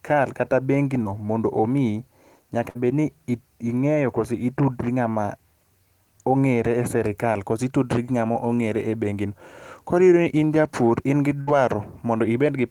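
Short concealed packet loss at 1.03 to 1.07 s and 8.33 to 8.37 s: about 20 ms of speech arrived too late, so the decoder extended the preceding sound, leaving a brief smear. Bursts of packet loss at 2.69 to 2.77 s and 11.41 to 11.49 s dropped about 60 ms each. The last sound was held and faded as a buzz or hiss, then speech resumed with that stretch missing.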